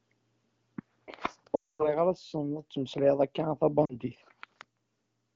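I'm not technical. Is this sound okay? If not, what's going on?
No. At 1.55–2.00 s the call hits lost AMR speech frames: radio errors corrupted the data, the phone stretched the last good sound, then faded to silence before "ara tesneḍ ad temmeslayeḍ". A shorter dropout follows at 3.85–3.99 s, after "ad temmeslayeḍ akka a".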